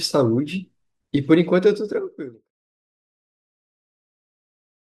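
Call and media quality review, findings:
No faults found in the speech signal; the level tapers smoothly from around 1.5 s down to silence at 2.51 s, an editorial fade-out with no hard edge.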